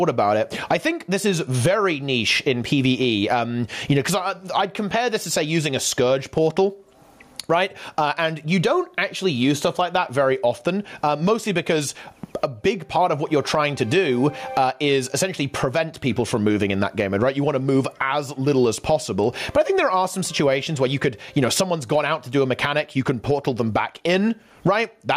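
Throughout the clip there is gain pumping, most likely from an input gain set far too high with a fast limiter or compressor reining it back in whenever a loud sound arrives. The level swings by around 20 dB. Loud and soft passages sit unnaturally close in level, and the whole recording sounds squashed and breathing.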